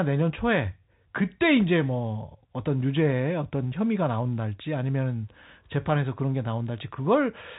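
Speech, and nothing is technically wrong with it.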